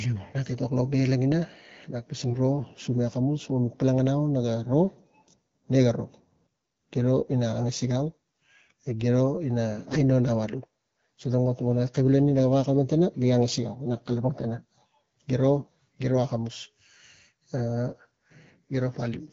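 Speech carried over AMR wideband (HD Voice), whose light coding fits a mid-rate mode around 12.65 kbit/s. At 2.28–2.36 s and 9.85–9.98 s the voice briefly turns hoarse, scratchy and gargly while keeping its pitch and level. These are AMR bit errors: a few percent of the weakly protected bits flipped, misplacing excitation pulses and skewing gain and spectral parameters.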